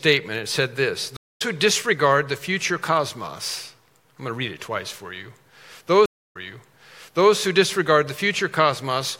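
At 1.17 s a stream reconnect drops the audio for 235 ms, leaving a blank vertical band in the spectrogram and a flat waveform, and it resumes roughly 0.2 s further on. At 6.06 s a second reconnect silences 292 ms, then restarts 0.98 s earlier, so that stretch repeats.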